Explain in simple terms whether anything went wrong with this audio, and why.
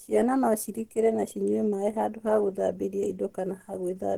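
Opus compression, throughout: the speech sounds grainy and plainly hoarse, likely because Opus, squeezed for space, roughly rebuilt fine detail instead of keeping it exactly.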